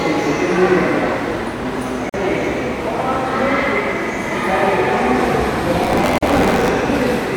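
At 2.09 s the sound drops out for about 44 ms and then resumes exactly where it stopped, with softened edges. This is a gap at a join of encoded pieces: two separately encoded segments were spliced without trimming the encoder's start-up delay and last-frame padding, so that silence remains. The same kind of hole appears again at 6.18 s, lasting about 43 ms.

From 5.82 s to 6.68 s the sound takes on a robotic buzz at 93.8 Hz, present only while the sound plays. This is buffer tearing: writer and hardware reader have drifted until they cross inside every period, which fits a 512-sample buffer. A small slice of each buffer replays audio from roughly 20 ms earlier, with a hard join on both sides.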